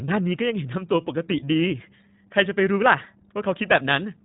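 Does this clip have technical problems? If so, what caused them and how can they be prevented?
Yes. The whole recording passed through the iLBC codec, which models each short frame of speech on its own. Everything above about 3.9 kHz is gone, and the speech has a plainly rough, synthetic edge, consistent with 20 ms frames at around 15.2 kbps. Using a wideband codec or a higher-quality link would prevent it.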